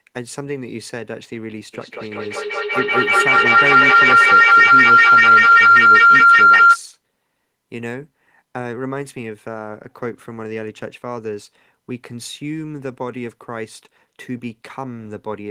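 From 1.74 s to 6.81 s a feedback howl builds as a microphone-to-loudspeaker loop adds gain on each pass. It narrows to a tone around 1.5 kHz, pulsing roughly every fifth of a second, and peaks about 16 dB above the speech.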